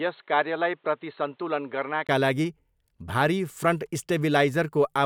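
A speech clip whose input likely switched to a poorer device for the opening stretch, from 0.0 to 2.09 s: that device cuts everything above 4.2 kHz, sits about 5 dB quieter with its own faint noise floor, and sounds dull until a brief 20 ms gap restores the fuller sound.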